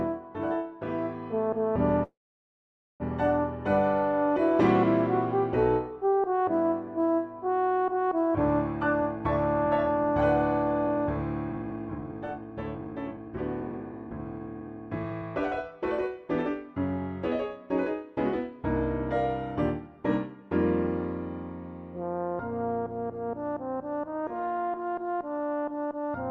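At 2.03 s there's a call audio freeze lasting until 3.03 s. The sound briefly trails on as a fading buzz or hiss and then drops to near silence for most of that second. It's likely packets stalled and the jitter buffer ran dry. When playback resumes it picks up where it left off, so nothing's lost, just a gap of almost a second.

From 11.5 s to 15.2 s you get a jitter buffer speed-up. The receiver trimmed tiny pitch-period slices over and over to claw back delay, about a second in total. Everything runs roughly 123% fast but keeps its pitch, so it sounds rushed.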